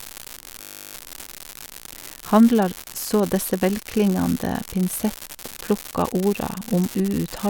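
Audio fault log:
Throughout: unreliable data bit. A steady crackle and fizz sits under the whole clip. It carries on through the pauses between phrases. One data line in the signal path is marginal. Its bit comes out wrong in a random share of samples. Each wrong bit adds a spike of the same fixed size. Scattered at random, those equal spikes merge into a constant granular hiss that does not follow the speech.
0.62 to 0.94 s: system hang loop. The speech stops moving and a steady buzz takes over for about a third of a second. One 20 ms slice of audio repeats exactly, 16 times, at 50 Hz. The computer or driver froze while the sound hardware kept replaying the same ring buffer. Such a short loop fuses into a pitched buzz at the loop rate rather than a stutter. Little or no speech appears to be missing afterwards.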